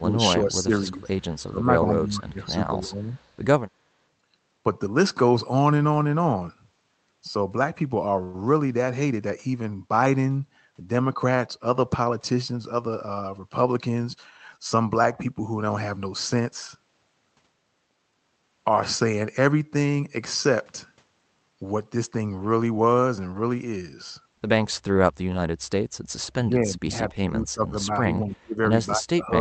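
From the start, the speech keeps ducking in short pieces at 0.00–0.73, 0.91–1.13, 1.47–1.85, 2.01–2.58 and 2.83–3.13 s, with dips of roughly 10 to 20 dB. This is likely speech suppressed in double talk: with both ends active, the echo canceller treats the near talker as echo and turns the signal down. Throughout, the call codec limits the audio to roughly 8 kHz.

At 3.11–3.29 s, a brief, faint copy of the preceding sound trails about 251 ms behind it, sitting around 40 dB below the speech. That points to an echo leak, where part of the far end's loudspeaker signal slipped past its canceller and returned. Room reverberation would smear continuously from the source, but this is a distinct delayed repeat.

From 26.34 s to the end, the same double-talk ducking returns for a longer stretch, pulling the speech down by roughly 25 dB at its deepest.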